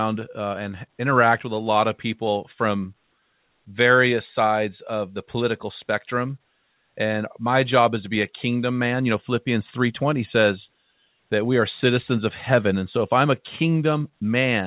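Nothing stood out on listening to this speech, which comes through a call path whose narrowband telephone coding leaves nothing above 4 kHz.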